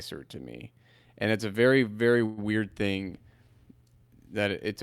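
A call audio freeze runs from 2.25 to 2.39 s in this speech. For about 0.12 s the last sound is stretched into a fading buzz or hiss rather than going quiet, and then the speech resumes exactly where it left off, with nothing skipped. The likely cause is packets stalling in transit so the jitter buffer emptied and the receiver filled the wait itself; the result is that everything afterwards arrives about 120 ms later than before.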